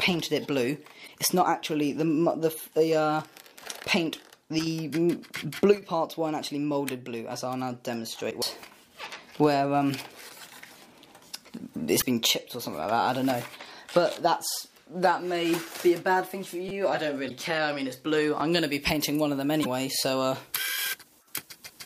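Damaged data in a compressed stream first shows up at 1.03 to 1.09 s. Part of the encoded stream arrived corrupted, so the decoder misread the frames there, lost sync and had to hunt for the next valid frame header. Each occurrence lasts roughly 56 ms and is heard as a brief chirp or squawk. The same fault recurs at 8.27 to 8.33 s, 11.98 to 12.03 s, 17.26 to 17.31 s and 19.61 to 19.66 s.

A repeated buffer occurs at 16.69 s, between the third and fourth stream errors. New audio failed to reach the output device in time, so the device replayed its last buffer, about 5.8 ms long, which fits a 256-sample buffer. It played three extra times, displacing about 20 ms of audio. Because the buffer is so short, the repeats fuse into a brief buzzy click rather than an audible stutter. A second repeated buffer at 18.40 s plays just once more, leaving a single hard click.

Pre-emphasis left on begins at 18.52 s and lasts to the end. 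The treble boost applied for transmission, which matches a 50 µs FM curve, was never undone by the corresponding de-emphasis. The highs sit about 10 dB above 1 kHz at 10 kHz, so the audio turns thin, bright and hissy with exaggerated sibilance. The final stream error at 19.61 s falls inside this brightened section.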